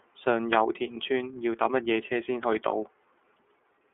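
The iLBC codec colours the speech from start to finish. This narrowband VoIP coder squeezes the signal into a line band of roughly 300 Hz to 3.4 kHz, so the speech sounds thin and boxed in, with no air or sibilant sparkle above 4 kHz. The damage is plainly audible: a rough, slightly synthetic grain, because each 30 ms frame's excitation is coded on its own, at a rate that fits the 13.33 kbps mode.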